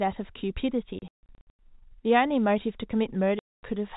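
From 0.99 to 1.59 s the speech breaks up with packet loss filled with silence: about 390 ms goes missing across that 600 ms stretch, in holes up to 150 ms long, which fits 30 ms packets. The receiver plays dead air in their place, so each gap has hard edges. Another burst from 3.39 to 3.63 s drops about 240 ms, all under the usual 4 kHz ceiling of G.711 telephone coding.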